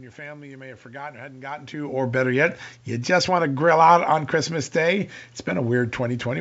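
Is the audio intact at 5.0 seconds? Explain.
Yes, the speech is intact at 5.0 seconds; the only things present there are the background noise of the room and the ordinary sound of G.722 wideband telephone coding, and neither is a fault.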